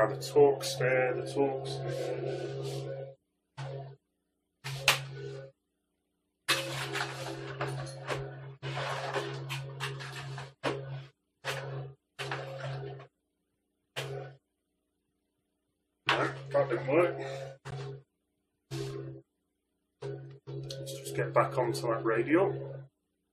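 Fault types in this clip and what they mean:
Gap between stream segments: at 17.71 s the timestamps of adjacent 6-second segments leave a short hole that the player fills with silence, adding about 15 ms. The waveform drops to silence with abrupt edges, and the spectrogram shows a thin, full-height blank stripe.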